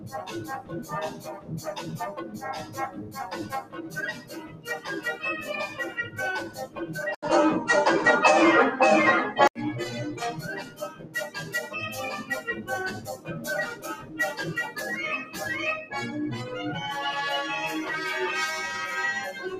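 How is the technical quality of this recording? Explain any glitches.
The recording is compromised by a speech-oriented noise suppressor left running on non-speech sound. Its gain swings by around 15 dB, so held sound pumps and thins, and the waveform envelope breathes unevenly.

The noise suppressor cut sound at 0.0–4.67 s, 5.7–6.78 s, 10.37–11.54 s, 12.99–13.43 s and 13.75–14.19 s. Steady or fading sound was treated as noise and dropped by about 11 dB (about 9 dB in the last span), so decays sink early. The spectrogram shows dimmed, truncated tails there.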